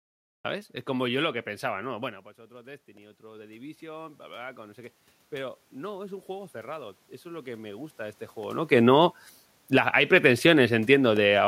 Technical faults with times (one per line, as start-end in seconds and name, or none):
0.00-0.45 cut-off start
1.81-4.86 automatic gain rising
5.37-8.27 automatic gain rising